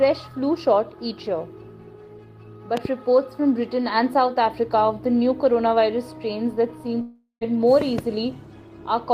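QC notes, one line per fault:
2.77–2.87 s and 7.81–8.01 s, loud pop: a quick double pop each time, around 15 dB above the sound running underneath, likely a voltage spike from a plug, switch or static.
7.01–7.43 s, long network dropout: about 400 ms of audio likely never arrived, so the last sound gets stretched into a fading buzz or hiss, then ends in roughly 100 ms of silence before playback resumes further on.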